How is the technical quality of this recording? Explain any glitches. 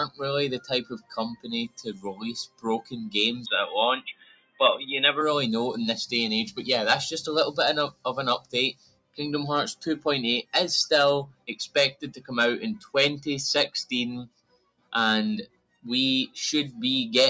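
The recording's technical quality is compromised by a speech-oriented noise suppressor acting on non-speech material, with audible level dips throughout. The call-style microphone path leaves nothing above 8 kHz.

Noise suppressor applied to music or sounds, across the whole clip: the suppressor treats sustained tones and tails as noise and pulls them down, with gain swinging by about 15 dB, so the sound pumps and thins while attacks come through.

Sound cut by the noise suppressor, at 0.6 to 2.93 s, 4.07 to 4.6 s, 8.4 to 9.19 s, 11.27 to 11.48 s, 11.93 to 12.3 s, 12.79 to 12.94 s, 14.27 to 14.94 s and 15.46 to 15.85 s: held or decaying sound is judged noise and dropped by about 17 to 21 dB, so it sinks in level or its tail vanishes.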